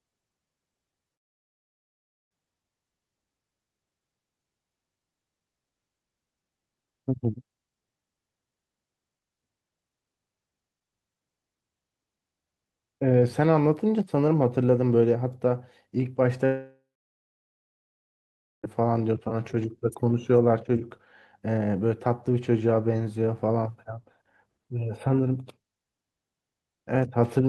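Right at the start there are two short concealed packet losses, at 0.91 to 0.94 s and 1.08 to 1.12 s. Each time about 20 ms of the speech failed to reach the decoder in time. The receiver papered over the gap by stretching out the last bit of sound and then blending back in, so you hear a tiny smear or wobble rather than a clean hole.

Almost immediately after, from 1.14 to 2.40 s, the audio cuts out for about 1.2 s. That's most likely a long network dropout. The concealment barely carries anything over before it goes quiet for about 1.15 s, and the speech picks up later without the lost stretch. The same thing happens again from 16.46 to 18.65 s. This time about 2.2 s goes missing, including about 1.8 s of silence, before the sound returns.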